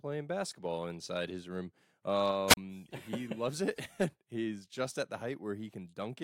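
At 2.48 s a wireless microphone squelch dropout occurs: the FM signal fades, hiss rises briefly, then the receiver's squelch mutes the speech for about 35 ms before it returns at 2.57 s.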